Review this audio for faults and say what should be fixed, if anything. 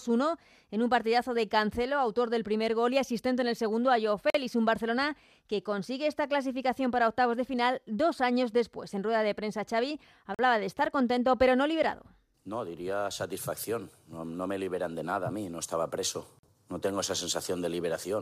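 Gap between chunks at 4.30–4.34 s, 10.34–10.39 s and 16.39–16.43 s. Each is a 44 ms hole of silence with hard edges, recurring every 6 s. No speech is lost. The audio just stops briefly at each chunk join. Prevent it by trimming codec padding and starting each chunk the instant the previous one ends.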